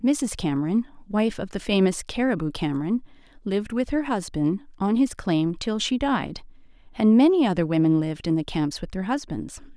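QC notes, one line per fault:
No technical faults can be heard in the signal, and it needs no corrective action.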